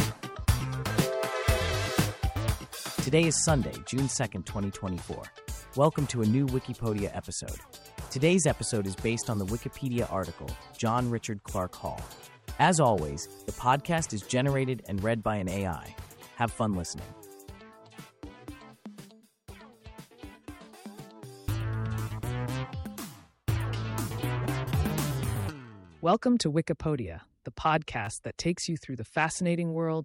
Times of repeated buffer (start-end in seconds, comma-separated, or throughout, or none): 0.60, 28.05